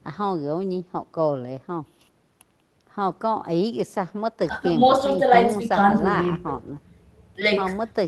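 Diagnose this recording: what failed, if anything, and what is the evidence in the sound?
Nothing failed here: the speech comes through a call path that is working normally, and the sound shows no evidence of any fault.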